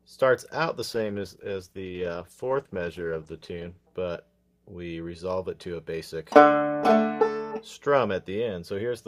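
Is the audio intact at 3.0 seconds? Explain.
No, a call bitrate drop runs from 0.9 to 3.97 s. The encoder fell from 64 to 15 kbps, coding more coarsely and trimming high frequencies, so the sound turns rough, watery or muffled.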